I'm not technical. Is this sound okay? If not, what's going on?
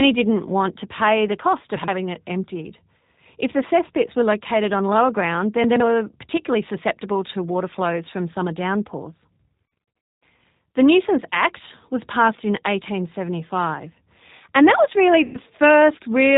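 No, it has three problems you can hear.

First, the whole recording has been through the G.729 codec, a squeezed-down phone-call format. It rebuilds the voice from a rough model rather than keeping the real sound, and it throws away everything above 4 kHz. That's why the speech sounds dull, slightly rough and a bit robotic from start to finish. You can follow every word, but the natural detail and crispness are gone.

Second, around 5.64 to 5.8 seconds, there are chunks out of order. Right after "located on lower ground", a small slice of audio, about 40 ms long, turns up three slices later than it should, so the pieces play in the wrong sequence. Nothing is missing, but the joins are abrupt, so you get a brief jumbled stutter just before "were particularly susceptible to".

Third, near the end, from about 15.24 to 15.37 seconds, just after "and that was really", there's VoIP packet loss concealed by the speech codec. 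About a tenth of a second of the call went missing in transit, and the decoder filled the hole by guessing from the last bit of voice it had. That guess comes out as a short stretched sound, a buzzy tone or a coloured noise, that fades away. The voice can stay a little weak or off for a moment after the gap.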